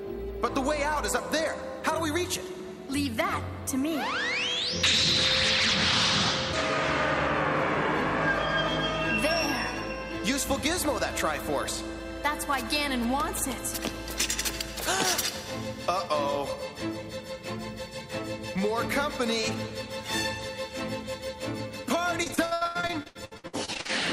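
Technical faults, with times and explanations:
22.23–23.91 s, repeated packet loss (robotic sound): near the end, the audio breaks into a rapid run of dropouts, the longest 81 ms. Each hole gets filled by stretching the previous sound, so about 45% of the stretch is patched, which makes it choppy.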